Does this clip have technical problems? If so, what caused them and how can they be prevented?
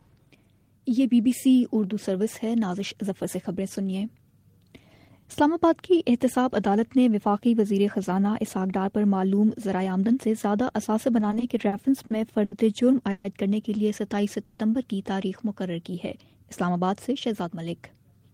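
Yes. Repeated stalls (stutter), 11.19 to 12.53 s: eight short gaps, the longest 70 ms, are filled by stretching the last sound, so it drags without losing content. Steadier network delivery prevents this.

Call audio freezes at 13.11 and 14.45 s: each is a single held buzz of about 130 to 140 ms, one long gap rather than many, likely caused by packets held up en route. A deeper jitter buffer prevents it.

Jitter buffer speed-up, 17.10 to 18.04 s: the sound runs 5% faster at unchanged pitch, with about 70 ms trimmed. Smoothing delay spikes before they build up prevents this.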